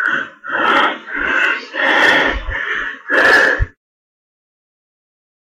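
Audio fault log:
0.06 s, 0.64–0.86 s, 1.39–2.30 s, 3.14–3.63 s: hard clipping, with peaks cut flat by overloads of about 1, 4, 5 and 7 dB. The abrupt flat tops add high harmonics, giving a crackle that harshens with more overload. Soft saturation would sound rounder.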